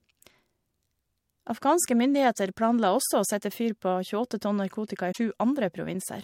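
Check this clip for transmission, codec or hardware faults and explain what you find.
One fault turns up in the speech. From 5.08 to 5.18 s, a brief disruption breaks through. This is damaged data in a compressed stream: corrupted bytes make the decoder misread those frames and lose sync until it finds the next valid frame header.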